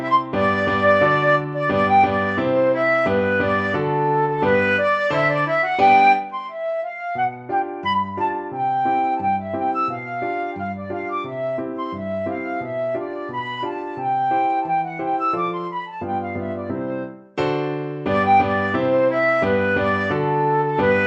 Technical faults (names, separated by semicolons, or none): none